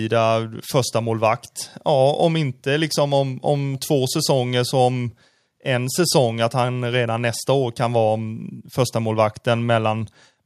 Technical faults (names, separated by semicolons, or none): none